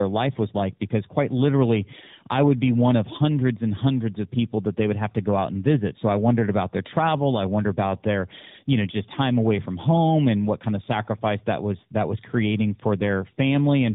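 Throughout the speech, tandem speech coding makes it rough, muffled and warbly, as the audio was decoded and re-encoded twice by a low-rate speech codec, which fits AMR-NB at 12.2 kbit/s around a G.711 link. A spectrogram shows nothing above 3.8 kHz and smeared, blotchy formants.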